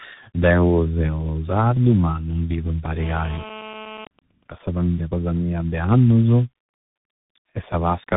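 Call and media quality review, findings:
Tandem speech coding, whole clip: rough, muffled, warbly speech, nothing above 3.8 kHz. Two lossy speech coders in a row, a low-rate CELP stage that fits G.723.1 at 6.3 kbit/s, then a CVSD-type delta modulator after a G.711 mu-law hop. Each coder re-encodes the previous one's artefacts, so degradation compounds.

GSM phone buzz, 2.99–4.04 s, right after "sardu ma non bivu": hard raspy 217 Hz buzz with dense harmonics, about 15 dB below speech, steady and unrelated to the audio. Nearby 2G handset in an active call; its TDMA bursts are rectified by the audio circuitry.

GSM signalling bursts, 4.04–5.01 s, ending just before "cosa mia de annusu": even ticks with a longer 217 Hz buzz twice a second, well below speech level. Nearby 2G handset, its user silent in the call, sending only sparse burst groups, each rectified into an audible tick or brief buzz.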